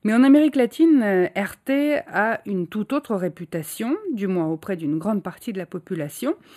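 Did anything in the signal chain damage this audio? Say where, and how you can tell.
Yes, channel delay (comb filtering) throughout, probably at the driver or buffer stage. The speech sounds hollow, notched around 5 kHz, because one channel lags about 0.1 ms before the mono sum.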